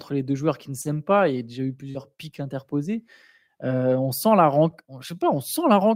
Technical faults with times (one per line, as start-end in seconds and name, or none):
0.81-0.87 short concealed packet loss
1.91-1.97 short concealed packet loss